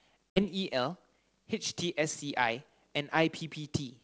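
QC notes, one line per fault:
0.30–0.47 s, packet loss on an ADPCM call: roughly three packets, about 60 ms of audio, drop out and are replaced by silence with abrupt edges. Because the G.722 decoder's adaptive predictor and step size kept no track of what was lost, they no longer match the sender's state when speech resumes. The return comes in with brief, slight distortion, settling within some tens of milliseconds as the decoder re-converges.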